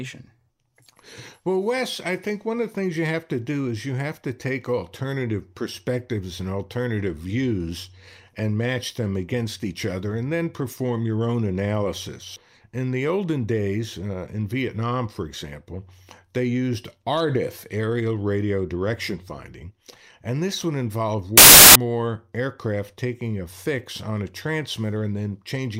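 Samples built from the wrong bytes, from 21.38 to 21.75 s: for about 0.38 s the speech is replaced by a burst of loud, harsh broadband noise. The reader has assembled each sample from misaligned or swapped bytes, so the rapidly fluctuating low-order bits end up in the most significant position. The result is dense, loud hiss that bears no resemblance to the speech around it.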